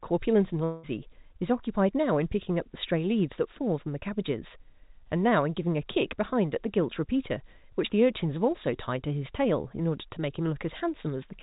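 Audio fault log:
0.64–0.85 s, long network dropout: for about 0.2 s the sound is replaced by a synthetic buzz that stretches the last moment and fades without reaching true silence. The speech then resumes further along with that stretch simply gone, the likely result of a run of lost packets concealed by the receiver. Unlike a brief packet-loss click or a clean mute, the filler is audibly drawn out and the missing content never returns, all within the 4 kHz band of the call codec.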